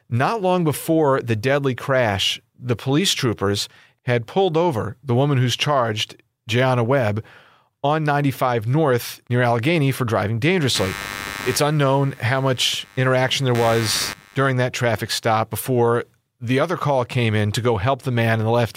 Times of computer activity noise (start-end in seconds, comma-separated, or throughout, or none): 10.75-14.51